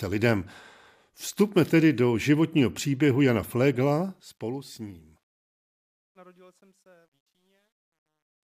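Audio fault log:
3.81–8.44 s: truncation distortion on a fade. As the fade-out starting around 3.8 s sinks toward silence, the level stage drops low-order bits without dither, so the quiet tail is rebuilt from a handful of coarse square steps, which fits a word length of about 11 bits. The grit rises with the falling level and is worst from 5.77 to 8.44 s. A noise gate would instead cut cleanly on and off.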